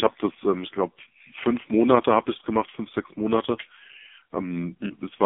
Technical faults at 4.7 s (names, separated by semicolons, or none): AMR narrowband mobile codec